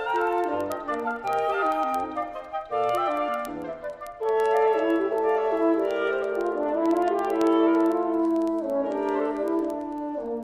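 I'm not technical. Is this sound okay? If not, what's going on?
No. From 0.10 s to 10.43 s there's a steady ticking, roughly twenty sharp clicks a second. These are word clock ticks: the receiving device's clock runs slightly off the sender's, so every so often a single sample slips.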